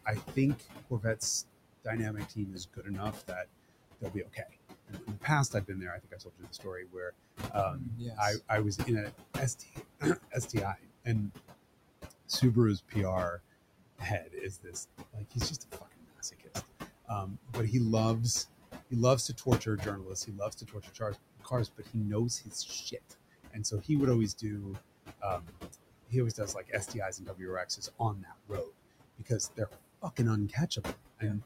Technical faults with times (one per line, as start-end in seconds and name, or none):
0.00-31.45 noise suppressor artifacts
0.05-1.21 speech cut by the noise suppressor
1.84-3.46 speech cut by the noise suppressor
4.00-11.33 speech cut by the noise suppressor
12.11-13.39 speech cut by the noise suppressor
13.96-17.72 speech cut by the noise suppressor
18.90-31.23 speech cut by the noise suppressor